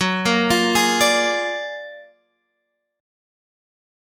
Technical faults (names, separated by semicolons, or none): noise suppressor applied to music or sounds; sound cut by the noise suppressor